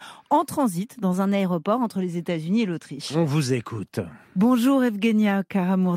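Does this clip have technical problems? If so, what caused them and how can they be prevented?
Yes. A drift correction step runs from 1.13 to 1.91 s, just after "en transit": the speech speeds up by about 5.5% and rises roughly 92 cents, just under a semitone, before snapping back to normal. Speed and pitch move together, which likely comes from clock-matching software abruptly changing the playback rate to refill or drain its buffer, rather than adjusting it gradually. To prevent it, use a shared clock between devices or a resampler that corrects drift in small, continuous steps.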